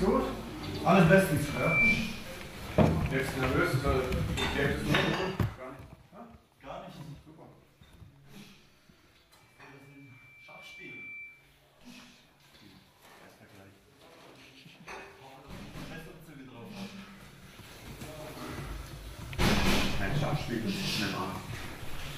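At 9.37 s a loudspeaker feedback squeal begins. A microphone is hearing the speaker it drives, and at 2.3 kHz the loop gives back more than it takes in. That tone feeds on itself. It swells over roughly a second and a half into a steady, piercing whistle. At its peak it sits a few decibels above the rest of the sound. The loop is broken at 11.58 s, and the squeal stops.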